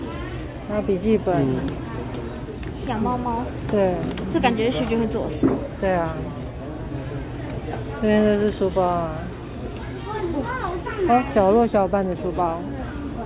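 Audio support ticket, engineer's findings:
No audible faults found.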